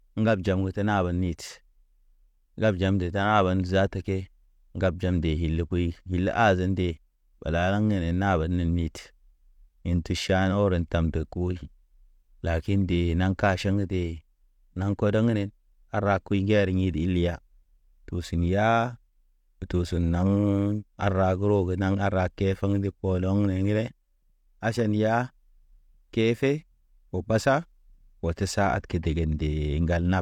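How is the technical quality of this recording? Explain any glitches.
The technical quality of this recording is good, with no glitches to explain.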